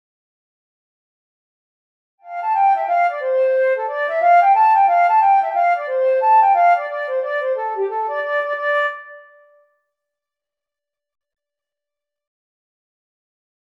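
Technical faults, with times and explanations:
No technical faults are audible anywhere here.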